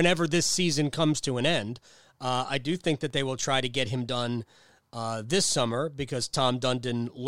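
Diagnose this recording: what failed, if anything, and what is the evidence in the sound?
CD scratch ticks, 2.72–3.49 s, before "to get him done": seven short clicks, about nine a second, as a disc blemish defeats error correction each revolution.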